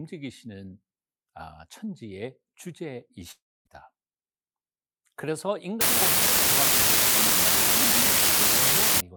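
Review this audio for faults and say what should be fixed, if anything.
From 3.31 to 3.67 s the last sound smears into a fading buzz, then about 240 ms of near-silence, with 340 ms of audio never returning, likely a long network dropout. A spectrogram shows blurred bands fading into an empty gap. Forward error correction and a deeper jitter buffer would prevent it.

From 5.81 to 9.00 s an unreliable data bit causes a steady crackle that continues through pauses. One marginal data line flips its bit in random samples, so every error is an equal-height spike. The waveform shows uniform needles, and the spectrogram shows broadband speckle. Repairing or replacing the faulty digital connection would prevent it.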